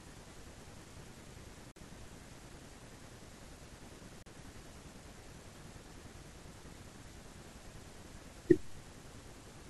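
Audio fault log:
1.71–1.76 s and 4.23–4.26 s, Bluetooth stall: the speech cuts to clean silence for about 47 ms, then 36 ms, before resuming. This is likely a wireless buffer running dry while delayed packets were resent. Unlike a codec dropout, the gaps hold true silence with no smeared or warbling fill.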